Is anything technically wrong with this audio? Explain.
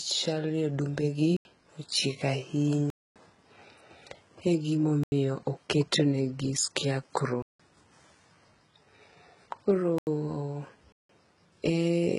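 Yes, two things. Throughout the clip the speech has the signature of heavy low-bitrate coding, most likely HE-AAC compression, and there's nothing above about 11.1 kHz. The top end sounds bright but synthetic, because the codec only really codes the lower band and fakes the treble by copying lower bands upward under a coarse envelope. Harmonics don't line up across that seam, so sibilants come out gritty and a bit metallic. The damage level fits a v2 stream at something like 12 kbps.

The speech is also cut by blocks of digital silence at 1.37 s (right after "odumbe gi"), 2.90 s, 5.04 s, 7.42 s (right after "gi scare crow"), 9.98 s and 10.92 s. They last about 85, 256, 85, 171, 85 and 171 ms. Each is a run of samples forced to zero, typically because the output buffer wasn't filled in time. The sound drops out and returns with no fade, leaving a short hole. Those 85 ms units point to 4096-sample blocks at 48 kHz, with the longer gaps being two or three of them back to back.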